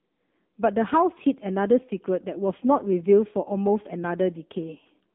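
Throughout, heavy AMR narrowband mobile codec damage, consistent with about 6.7 kbps, sounds buzzy and synthetic; the spectrogram spans 200 Hz to 3.6 kHz, blank above 3.7 kHz.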